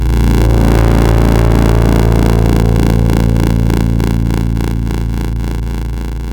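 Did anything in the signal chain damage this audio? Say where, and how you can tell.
Yes. A block size mismatch (padded) at the driver or buffer stage runs through the whole clip. An 86.1 Hz buzz sits under the sound, and everything plays at 0.861 times normal speed. That fits shorter written blocks being zero-filled to a 512-sample read.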